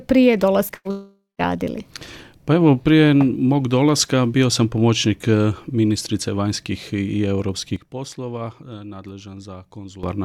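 At 0.67 to 0.71 s there is a short concealed packet loss. About 20 ms of audio never arrived, and the receiver bridged it by extending the preceding sound for roughly 14 ms before blending back. It is heard as a brief smear rather than a gap, which sets it apart from the longer losses that follow.

From 0.75 to 0.87 s a burst of packet loss removes about 100 ms. The receiver stretches the last sound across the whole hole while fading it, so a held buzz or hiss replaces the audio. The sound then resumes further on without the missing portion and without ever reaching silence.

Between 0.91 and 1.41 s the audio drops out for about 480 ms, most likely a long network dropout. The continued sound fades away, and the last 170 ms is plain silence before the audio returns with that stretch gone. The silent tail is what distinguishes it from a burst loss.

At 7.76 s the level falls abruptly by about 12 dB, with the sound and its background noise dropping together. 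This is likely a sudden gain jump, a digital gain change applied without a ramp. It lasts until 10.03 s, when the level snaps back. The loss here is level only, with no audio missing.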